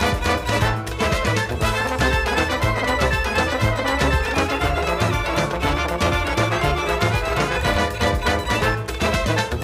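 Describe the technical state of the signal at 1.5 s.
At 1.5 s the signal is intact, with no technical fault audible at that point.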